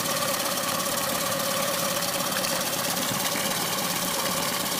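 At 1.36 to 1.38 s and again at 3.38 to 3.40 s the audio stutters with a brief click, the mark of overlapping chunks. Each new 2 s block begins before the previous one finishes, so 20 ms of sound plays twice at the join. On the waveform, a short stretch repeats with a sudden discontinuity where the copies meet; a spectrogram shows a thin vertical broadband line at each join, 2 s apart.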